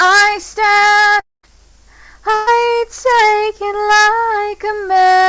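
A long network dropout likely interrupted the stream from 1.20 to 1.45 s: roughly 0.24 s of audio never arrived, so the last sound is stretched and fades to near silence before resuming. At 2.35 to 2.49 s, a burst of packet loss removed about 0.12 s; the gap is bridged by a held, fading continuation with no silence, over a band ending at 8 kHz that fits a G.722 call codec.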